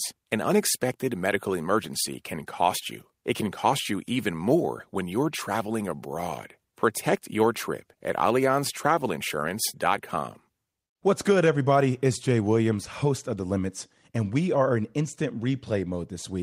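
Nothing goes wrong anywhere in this speech recording, so there's no problem to point to at any moment.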